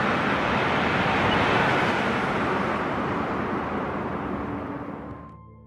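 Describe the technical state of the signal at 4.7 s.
Compressed frames skipped from 4.65 to 4.69 s: about 50 ms of audio never plays, so the sound jumps forward.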